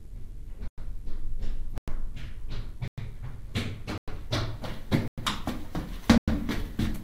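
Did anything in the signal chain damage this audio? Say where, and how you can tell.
Yes: a gap between chunks at the storage or playback stage, with hard-edged 100 ms silences at 0.68, 1.78, 2.88, 3.98, 5.08 and 6.18 s. The holes recur every 1.1 s, consistent with 1-second chunks each joined after a padded or late-starting silence, interrupting the sound without losing any.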